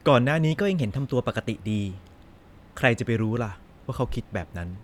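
From 0.52 s to 2.88 s the speech runs 5.2% fast and sits 88 cents sharp, close to a semitone, then snaps back to normal speed and pitch. This is a drift correction step, likely clock-matching software briefly speeding playback to drain its buffer.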